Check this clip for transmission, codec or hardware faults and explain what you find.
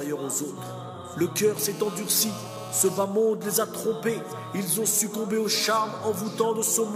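There's one hardware fault: GSM phone buzz from 1.57 to 3.00 s. A nearby 2G phone on a call was pulsing at 217 Hz, and the audio circuit rectified those bursts into a steady, raspy, harmonic-heavy buzz, about 17 dB below the signal and unrelated to it.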